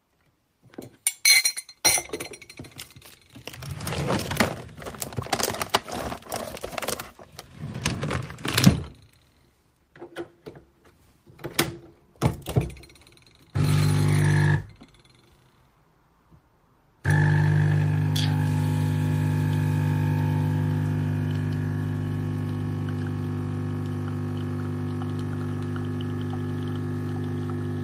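No technical faults can be heard anywhere in this recording.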